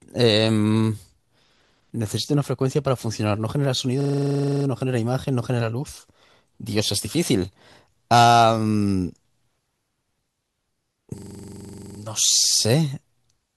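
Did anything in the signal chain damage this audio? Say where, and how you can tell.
Yes, a system hang loop at the driver or buffer stage, 4.01–4.65 s and 11.18–11.99 s. One 42.67 ms slice replays 15 and 19 times, a 23.4 Hz stutter that fits a frozen 2048-sample ring buffer. The waveform shows identical tiled blocks, and the spectrogram shows evenly spaced vertical stripes.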